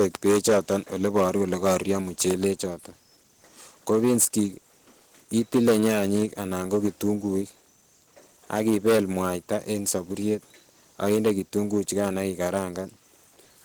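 Speech with hard clipping throughout: the level is pushed about 14 dB past what the chain can pass, so around three percent of samples are cut flat. Those squared-off peaks add high harmonics, heard as a harsh fuzz on louder syllables.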